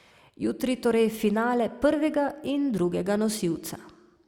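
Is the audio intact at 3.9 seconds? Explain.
Yes, the audio is intact at 3.9 seconds, with no fault to be heard at that moment.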